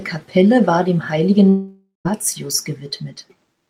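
At 1.49 s the speech breaks off and the last sound is stretched into a buzzy, fading hiss, followed by about 0.12 s of silence before the audio returns at 2.07 s. Roughly 0.56 s of material is simply skipped, which points to a long network dropout, likely a stream interruption. Its length sets it apart from a brief packet-loss glitch, and unlike a stall, nothing is played late; the lost part never reappears.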